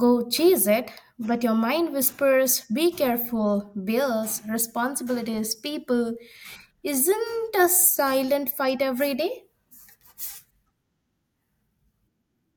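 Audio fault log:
No faults are heard in this speech recording. Nothing in it calls for a log entry.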